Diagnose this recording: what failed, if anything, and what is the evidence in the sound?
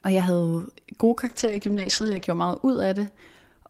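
A call bitrate drop hits the speech from 1.26 to 2.33 s, right after "og jeg havde gode". The network stage cut the bandwidth estimate, so the codec was pushed from 40 kbps down to 8 kbps and held near that floor for about 1.01 s. The speech turns muffled and watery, then clears. On a spectrogram the upper band goes blank above a low cutoff for that stretch, and the remaining harmonics look blurred and blocky.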